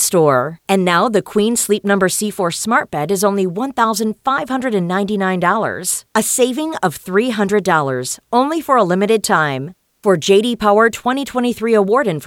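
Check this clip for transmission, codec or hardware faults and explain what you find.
No transmission, codec or hardware faults.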